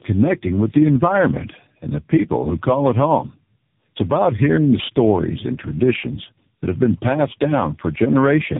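Throughout the speech, tandem speech coding is heard. The call passed through three speech coders in turn, likely AMR-NB, then CVSD, then AMR-NB again. Each re-coded the last one's damage. Nothing reaches above 3.8 kHz. The speech sounds rough, muffled and warbly.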